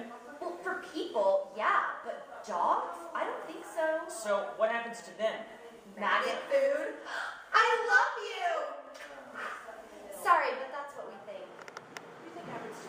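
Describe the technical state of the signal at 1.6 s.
The signal at 1.6 s is intact, with no audible dropout, click, distortion or other technical fault at that moment.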